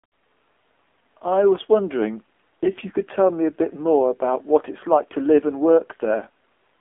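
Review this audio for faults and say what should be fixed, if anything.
AMR narrowband mobile codec, throughout: sound sits in a 250 Hz to 3.4 kHz line band with nothing above 3.6 kHz, and the buzzy, synthetic texture fits a low mode around 7.4 kbps. To prevent it, capture or route the speech over a wideband or full-band path rather than a narrowband mobile link.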